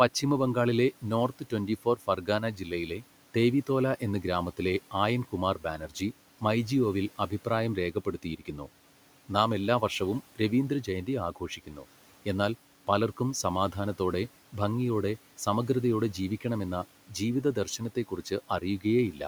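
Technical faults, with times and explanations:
1.28–3.04 s, 5.6–6.01 s, 11.36–11.84 s and 17.55–18.31 s, speech cut by the noise suppressor: the suppressor mistook brief parts of speech for the room noise and turned them down by about 9 to 12 dB, so syllables turn faint or swallowed just before "ദേവിതോല എന്ന ഗ്രാമത്തിലെ ആയൻ", after "എന്ന ഗ്രാമത്തിലെ ആയൻ കുമാർ", and between "നാം എല്ലാ വർഷവും രവീന്ദ്രജയന്തി" and "എന്നാൽ പലർക്കും സമാധാനത്തോടെ ഭംഗിയോടെ".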